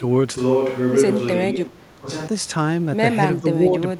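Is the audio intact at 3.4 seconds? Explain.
No. From 3.41 to 3.5 s the speech sinks by roughly 10 dB for about a tenth of a second before recovering. This is speech suppressed in double talk, likely caused by the far side talking at the same moment: the echo canceller could not tell the near talker apart from its own loudspeaker echo, so it attenuated everything it heard, taking the wanted speech down along with the echo.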